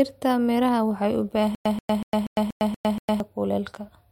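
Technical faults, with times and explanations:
1.55–3.20 s, stutter with silent gaps: right after "miraha waxay u" the speech stalls, and a 134 ms fragment keeps coming back seven times every 239 ms with about 105 ms of dead silence between. That's likely a stalled stream replaying its last chunk, so the missing audio is simply gone.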